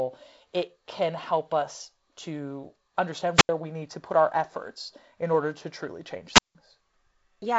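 A brief surge of hiss falls into near silence at 3.34–3.49 s, a gap of about 82 ms before "we need to put", and again at 6.32–6.55 s, about 169 ms after "order to truly change". This is wireless microphone squelch dropout: the receiver mutes its output as the radio signal fades.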